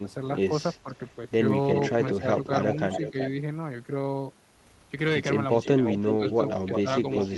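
From 0.02 to 0.9 s the speech dips in short patches, at worst by around 15 dB, likely speech suppressed in double talk: the echo canceller, faced with both sides talking, turned down the near talker along with the echo. From 1.08 to 3.29 s a delayed copy of the speech follows about 373 ms behind, only a little quieter than the original. This is likely an echo leak, where a loudspeaker's output reached the far microphone and was not fully cancelled. Within that stretch, 2.2 to 3.16 s brings further brief dips of around 10 dB, again likely double-talk suppression. The same pairing returns later. An echo leak runs from 5.51 s to the end, trailing by about 346 ms and likely from the same incomplete cancellation. Suppression dips of around 10 dB fall between 5.79 and 6.88 s, likely from double talk again. The two differ. Suppression removes level from the talker and leaves holes in the speech. 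The echo leak adds sound, a second, slightly later voice layered on the first.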